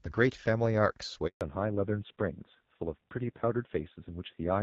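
At 1.27 s a handover gap cuts the speech dead for 140 ms, until 1.41 s. The sound fades out within a few tens of milliseconds and leaves clean silence as the call switches networks. Unlike packet-loss concealment, nothing fills the hole.

From 1.41 s to the end, a fallback to narrowband takes over. The light coding haze of the wideband HD Voice path before the gap, which fits AMR-WB at about 12.65 kbit/s, gives way to a band with nothing above 4 kHz. The speech turns dull, muffled and raspier, which points to AMR-NB at around 5.9 kbit/s. Because the loss of bandwidth is abrupt and lasting, it is a codec switch, not a filter sweep or a momentary dropout.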